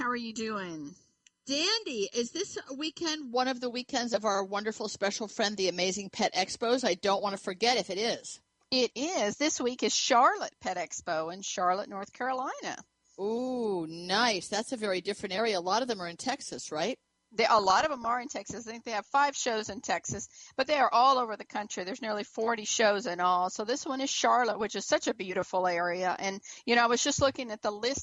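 From the start to 3.33 s, one channel arrives late by about 0.7 ms, and the two are summed to mono, producing channel delay (comb filtering). Components common to both channels cancel at evenly spaced frequencies, with the first notch somewhere around 700 Hz and further notches above it at regular intervals. The result is a hollow, phasey colouring that stays fixed for those opening seconds.

Later, weak reception lets bit errors slip past error correction into the MP2 data, giving DAB burbling at 17.58 to 18.09 s, 20.03 to 20.70 s and 24.61 to 24.96 s. Corrupted samples put short blips of noise in single sub-bands, and corrupted scale factors make sub-bands jump in level for up to a frame, which points to a run of damaged frames in each burst and an error rate of a fraction of a percent. It comes through as bursts of burbling laid over the audio.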